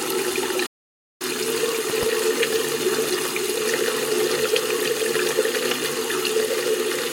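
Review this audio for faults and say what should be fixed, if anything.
Playback stall, 0.66 to 1.22 s: the sound cuts out mid-flow for about 0.54 s, then resumes. The likely cause is the player running short of buffered data or its audio thread being blocked, so nothing reached the output until it caught up. Giving the player a larger buffer and keeping its audio thread at high priority would prevent this.

Loud pop, 1.90 to 2.05 s: two sharp pops in quick succession sit about 10 dB above the surrounding sound, which carries on underneath. This points to a likely sudden voltage step, such as a switch, connector, static discharge or driver glitch, being shaped into a pulse by the downstream circuitry. Securing connections and avoiding switching or replugging during capture would prevent this.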